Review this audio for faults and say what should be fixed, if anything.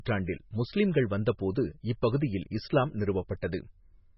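The speech carries heavy coding damage across the whole clip: nothing survives above 5.6 kHz, and the sound has a watery, swirling quality, with s sounds chirpy and metallic and consonant onsets smeared. This is likely MP3 compression at a very starved rate, which fits roughly 16 kbps. Short of bits, the encoder drops all treble above a fixed frequency and zeroes weak frequency lines, which then blink in and out frame by frame. On a spectrogram this shows as a hard flat ceiling at 5.6 kHz, with patchy, holed energy below it. To prevent it, keep the original uncompressed or losslessly coded audio, or encode at a much higher bitrate.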